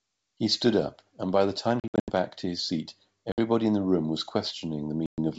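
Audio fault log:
1.80–2.11 s, 3.32–3.40 s, 5.06–5.19 s: packet loss on an ADPCM call. Lost packets become silence, and the decoder's predictor and step size lose sync with the sender's. The result is hard-edged gaps, then a brief level or distortion glitch as it resyncs. The first gap spreads 200 ms of loss over 280 ms (longest 80 ms), the second is 60 ms and the third 120 ms.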